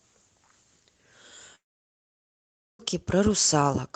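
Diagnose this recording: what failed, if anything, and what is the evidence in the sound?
Network stage: at 1.55 s the speech smears into a short fading buzz, then drops to near silence until it resumes at 2.82 s, with about 1.2 s of audio simply gone. That's a long network dropout, likely packets lost in transit while the receiver's concealment ran out, over a call path that sounds band-limited to around 8 kHz.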